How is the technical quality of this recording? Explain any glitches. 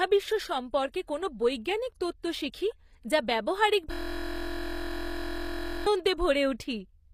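The recording has two faults: compression damage across the whole clip and a hang loop in the middle.

Throughout the clip, the codec damage is plainly audible, and nothing is present above 15.4 kHz. The likely cause is HE-AAC compression, at a rate that fits roughly 24 kbps. This codec transmits only the lower spectrum and rebuilds the treble by spectral band replication, copying lower bands upward under a coarse envelope. The top end is therefore a synthetic approximation, and its harmonics do not line up with those below the crossover.

From 3.92 s to 5.86 s there is a system hang loop. The host or driver stalled while the audio hardware kept replaying its ring buffer, so a single 23.22 ms segment repeats exactly, about 84 times. A period that short fits a 1024-sample buffer. Because the segment is so brief, the repetition is heard as a steady buzz at 43.1 Hz rather than a stutter, lasting nearly two seconds before normal audio resumes.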